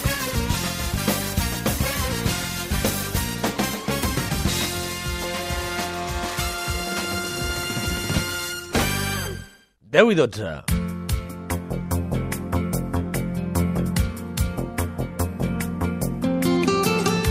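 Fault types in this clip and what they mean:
Nothing stood out on listening to this clip.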